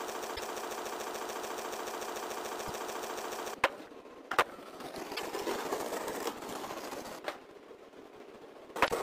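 From the first instant to 3.54 s, a broken-record loop is already running. A 145 ms fragment repeats exactly, back to back, some 26 times. The likely cause is a stalled stream resending its last buffer. Whatever should have played there is lost.

Damaged data in the compressed stream appears at 0.35 to 0.40 s, 2.65 to 2.71 s, 5.15 to 5.20 s and 8.85 to 8.92 s. Each is brief. The decoder misreads corrupt frames, loses sync and hunts for the next header.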